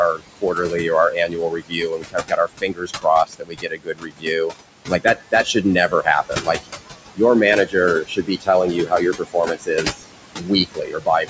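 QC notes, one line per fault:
throughout, noise suppressor artifacts: the room noise, about 10 dB below the speech, is pulled down by about 21 dB frame by frame, so it rises beneath speech and sinks between phrases.
0.12–4.55 s, 4.87–6.77 s, 7.66–11.3 s, speech cut by the noise suppressor: roughly 3 s, under 1 s and 2 s of speech are treated as noise and dropped by about 21 to 22 dB, so the speech itself turns faint and swallowed.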